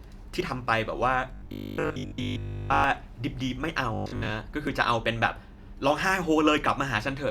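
At 0.41 s there's a small jump forward in the speech. That's likely a dropped buffer (overrun): the samples got overwritten before the software read them, so roughly 20 ms vanished and the two edges were butted straight together with no gap.

From 1.34 to 2.84 s the speech goes rigid and metallic, a buzz fixed at 50 Hz that still loosely tracks the talking. That's likely robotic sound from repeated short buffers. Fresh audio wasn't arriving fast enough, so a 20 ms stretch kept getting replayed to fill the time, and the repeat rate is what sets that 50 Hz pitch. Around 70% of what you hear there is repeats, with the real audio skipped.

The same buzz comes back from 3.94 to 4.30 s, likely the same repeated-buffer starvation at 50 Hz.

At 4.67 s there's another skip, likely a second dropped buffer, again losing about 20 ms.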